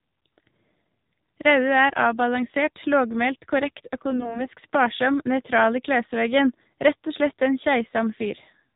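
A speech recording carried over the AMR narrowband mobile codec. Nothing above 4 kHz survives, so the sound is dull and boxy. The voice is plainly buzzy and synthetic, which fits a low mode around 7.4 kbps. From 4.10 to 4.46 s, AMR bit errors strike. The voice keeps its pitch and level but turns hoarse, scratchy and gargly. Less protected bits in ten frames were flipped on a weak link, perhaps a few percent of them. This misplaced the excitation pulses and skewed the finer gain and spectrum values.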